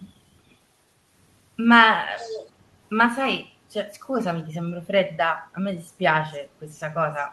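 From 2.16 to 2.5 s, a faint delayed copy of the speech trails the direct sound by about 0.46 s, sitting well below it in level. This is an echo leak, likely a far-end loudspeaker whose echo canceller let part of the pickup return.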